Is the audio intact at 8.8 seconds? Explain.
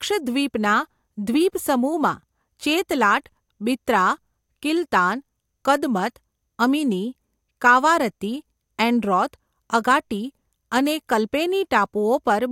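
Yes, the speech at 8.8 seconds plays through without any dropout, click, distortion or other audible fault.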